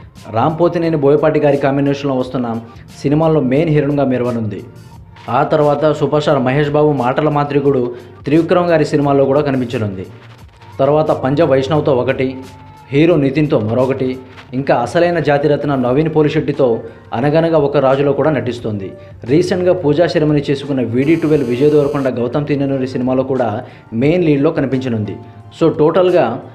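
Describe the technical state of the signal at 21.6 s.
At 21.6 s the signal carries GSM phone buzz, running from 21.02 to 22.09 s at about 24 dB below the sound. A nearby 2G handset on a call pulses its transmitter 216.7 times a second, and the audio circuitry rectifies those radio bursts into a hard, raspy, nearly steady buzz unrelated to the audio. A spectrogram shows a comb of horizontal lines at multiples of roughly 217 Hz, and the waveform shows a regular pulse train riding on the signal.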